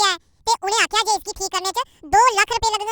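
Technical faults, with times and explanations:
Throughout, wrong sample rate: the speech races by at twice its natural speed and sits a full octave (12 semitones) too high, giving a squeaky, chipmunk-like, hurried quality with every syllable compressed in time. Speed and pitch move together because the samples are being read out faster than they were captured, with no rate conversion. The doubling fits audio recorded at about 22 kHz being played back at 44.1 kHz.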